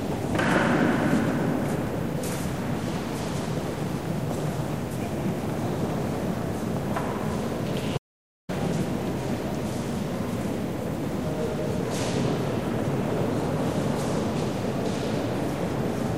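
At 7.98 s the sound cuts out to dead silence and comes back at 8.49 s, about half a second of nothing, not even room tone. It's an audio dropout to silence, likely the input link briefly failing while the recorder kept writing silence, so whatever happened there is lost.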